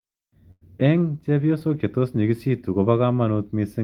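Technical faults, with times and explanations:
0.51–0.63 s: burst of packet loss. The last sound is held and fades away, then the audio jumps ahead. Roughly 100 ms never arrived in time and was bridged by extending the preceding sound.
1.59–1.62 s: short concealed packet loss. A brief smear just before "chetos nyigistu ko", where about 20 ms went missing and the decoder patched the gap by continuing the previous sound.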